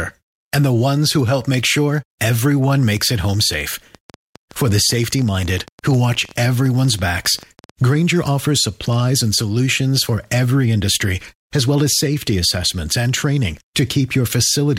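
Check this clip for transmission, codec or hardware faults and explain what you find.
One fault appears, a train of clicks from 2.97 to 7.71 s, just after "help make sure everyone". Around fifty similar ticks arrive unevenly, about 10.4 per second, roughly as loud as the speech and continuing through pauses. The likely cause is nearby electrical interference or a struggling interface. Unlike a single dropout pop, the repetition and matching shape mark it.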